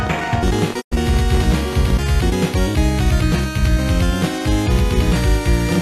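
A train of clicks runs from 0.07 to 1.91 s. About thirty irregular pops, roughly 15 per second, poke a little above the sound, likely interference from nearby equipment. A digital broadcast dropout hits at 0.80 s. The sound fades out over 20 ms and stays muted until 0.93 s, about 96 ms lost, consistent with four failed frames.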